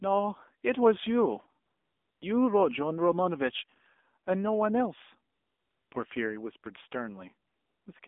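The whole speech clip passes through the AMR narrowband mobile codec. The sound is squeezed into a line band of roughly 250 Hz to 3.6 kHz. Nothing bright survives above that. The codec rebuilds the voice from a vocal-tract model and a few pulses per frame. At this low rate the damage is plainly audible. The voice sounds buzzy and synthetic, which fits a bitrate around 7.4 kbps.

AMR comfort noise appears four times. The first is from 1.66 to 2.22 s. The second runs from 5.34 to 5.92 s. The third is from 7.48 to 7.86 s. The last is a brief blip at 8.0 s. In each gap the phone stopped sending speech frames. The receiver filled the silence with generated noise. The real background vanishes. A smooth, even hiss switches in and out instead.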